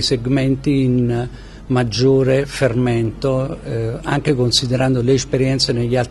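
No technical faults can be heard anywhere in the audio; the signal stays steady and intact throughout.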